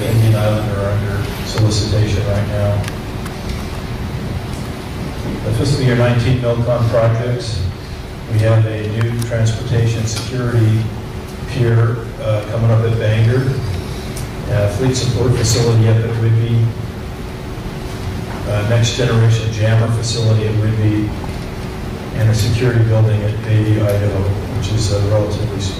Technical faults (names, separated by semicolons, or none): hard clipping